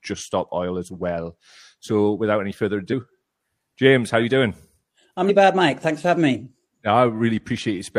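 Speech with compressed frames skipped twice, at 2.88 to 2.94 s and 5.25 to 5.31 s. Each time the sound jumps ahead, by about 150 ms and then 200 ms. That fits whole 46.4 ms frames going missing.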